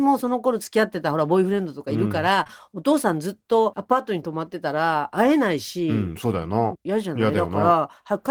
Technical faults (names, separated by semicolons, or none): short concealed packet loss